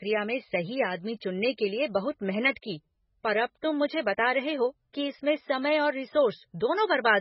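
Throughout the speech there is heavy MP3 compression damage, likely from a very low bitrate that fits about 16 kbps. Nothing remains above 5.5 kHz, so a spectrogram shows a hard ceiling there, with flickering gaps below that sound watery and swirly.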